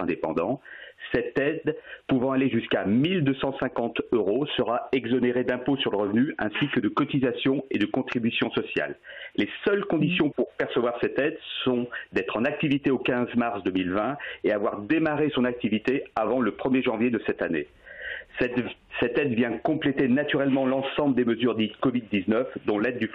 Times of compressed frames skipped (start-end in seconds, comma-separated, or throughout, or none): 3.89